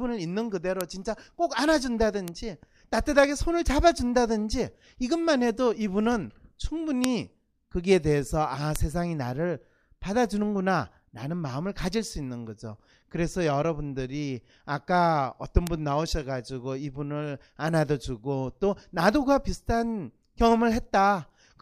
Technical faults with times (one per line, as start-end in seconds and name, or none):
0.81 bit error spike
2.28 bit error spike
7.04 bit error spike
8.76 bit error spike
15.67 bit error spike